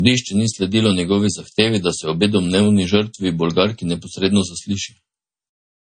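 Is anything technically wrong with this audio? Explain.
Yes. Throughout the speech, a hard ceiling at 9.3 kHz leaves nothing above it, and there is the swirly, smeared quality of heavy MP3 coding. This is likely low-bitrate audio saved at a high bitrate. A first encode around 32 kbit/s discarded the upper band and coarsely quantised the rest. A later encode at about 178 kbit/s preserved that damage faithfully but could not restore any of it. The result is a large file that sounds dull and watery.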